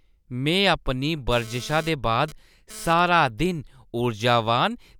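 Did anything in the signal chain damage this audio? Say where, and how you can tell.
Yes. GSM phone buzz entered at the analogue wiring stage, from 1.32 to 3.00 s. A hard, raspy buzz at 217 Hz sits about 20 dB below the speech, rich in harmonics. It comes and goes, as in a data transfer. The audio circuit rectified the phone's radio bursts.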